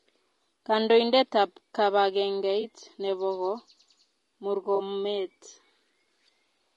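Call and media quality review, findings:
Low-delay AAC compression, whole clip: rough, grainy speech, noise filling gaps between harmonics, synthetic-sounding top band. Likely AAC-ELD short-frame coding at a rate that fits about 32 kbps. Constant throughout, not intermittent like loss events.

AAC frame loss with concealment, 2.61 to 2.64 s: brief smeared, noisy patch, one roughly 20 ms frame missing, filled from the previous spectrum. No silence or click, unlike a hard dropout.

AAC frame loss with concealment, 4.75 to 4.81 s: longer phasey smear, two frames (about 40 ms) concealed by repeating earlier spectrum. Localised, not the steady codec grain.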